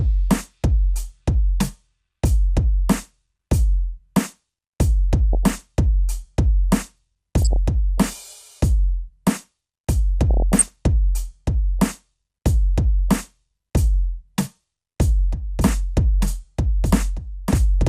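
Throughout, the music sounds dull, gurgling and granular. That is MP2 compression, likely at a low bitrate near 80 kbps, with upper sub-bands switched off.

DAB burbling appears at 5.33 to 5.54 s, 7.42 to 7.56 s and 10.31 to 10.68 s. Bit errors corrupt sub-bands, giving short blips of noise in single sub-bands.

From 15.58 s to the end, a doubled audio track starts abruptly. A dry, full-band copy about 5 dB quieter trails by about two seconds, likely from a slower capture path.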